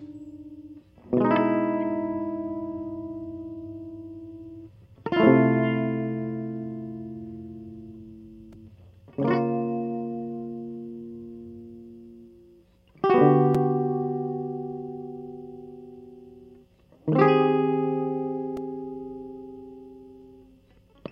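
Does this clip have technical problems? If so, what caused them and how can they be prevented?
Yes: a corrupt frame decoded at 8.54 to 8.56 s in the music, where a few damaged frames played with misread gains give a brief chirp, squeak, blip or burst of noise peaking around -35 dBFS, visible as a small stray smear on the spectrogram. Checksums with frame concealment prevent this.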